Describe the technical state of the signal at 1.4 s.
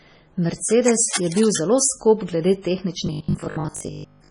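At 1.4 s, cable scratch noise runs from 0.66 to 1.56 s, ending just before "zelo skop glede". A moving worn contact changes resistance rapidly. That likely adds dense, uneven scratching about 10 dB below the signal.

MP3 compression damage is heavy here and throughout, which fits a low bitrate around 24 kbps. Weak frequency lines switch on and off between frames, and the treble is cut. The result sounds watery and swirly.

Just before, at 1.27 to 1.32 s, pre-echo spreads codec noise 46 ms ahead of an attack. That puts a short hiss before it and softens it.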